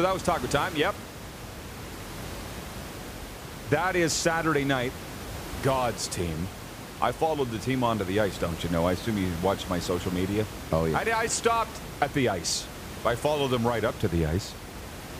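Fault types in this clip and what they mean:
No technical faults are present.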